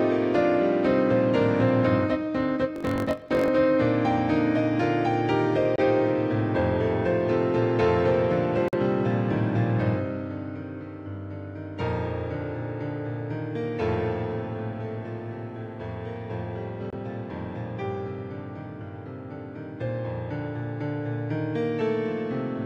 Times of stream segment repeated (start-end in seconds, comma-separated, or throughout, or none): none